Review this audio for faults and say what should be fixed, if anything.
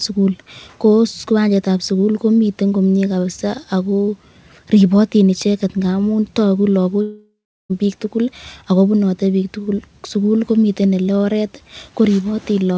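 Long network dropout, 7.02 to 7.71 s, right after "ribotin icheket ngamun toku" and before "piik tugul ak". The last sound is stretched into a fading buzz, then about 0.35 s of silence follows, and about 0.68 s of audio never returns. Packets likely stopped arriving and concealment ran out. To prevent this, give the link more stable bandwidth and use redundancy or FEC so short packet losses can be recovered.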